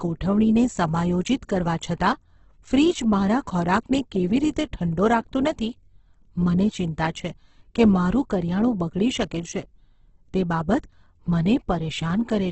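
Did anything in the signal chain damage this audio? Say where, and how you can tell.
Yes, at the codec stage, throughout the speech, likely Opus compression in its music mode. Nothing remains above 8.2 kHz, and tones sound rough and grainy rather than swirly. Bands starved of bits are filled with noise or folded copies, which fits roughly 12 kbps.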